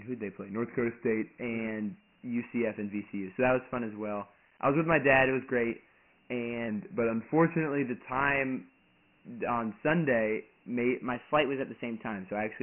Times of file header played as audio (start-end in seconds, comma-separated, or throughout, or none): none